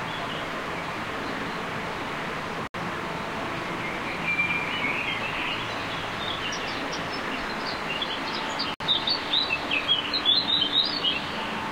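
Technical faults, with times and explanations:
2.67–2.74 s and 8.74–8.80 s, gaps at joins of encoded pieces: the sound just drops out for about 69 ms, then about 60 ms, six seconds apart, and picks up exactly where it left off. That spacing suggests the audio was encoded in 6-second chunks and butted together untrimmed, so each chunk's leading encoder delay and padded final frame stay in as silence. The edges are smeared by the codec, so the truly silent part is shorter.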